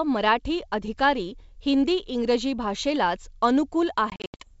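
From about 4.10 to 4.50 s, the speech breaks up from packet loss on an ADPCM call. About 200 ms of audio drops out in several hard-edged silent holes, the longest about 80 ms, which fits roughly ten lost packets. The decoder's predictor and step size drift from the sender's during each gap. So the speech comes back with brief, slight distortion. The wideband sound points to G.722 at 64 kbit/s.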